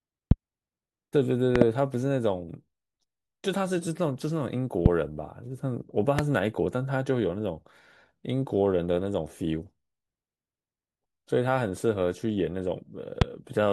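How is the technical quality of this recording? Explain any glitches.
The recording's quality is marred by five loud pops that stand out sharply above the speech. Loud pops at 0.31–0.34 s, 1.56–1.64 s (a double), 4.86–4.88 s, 6.19–6.21 s and 13.22–13.24 s, likely voltage spikes from switching or static, hit around 20 dB above the speech, which carries on underneath. Each appears as a narrow waveform spike and a thin full-band vertical stripe on a spectrogram.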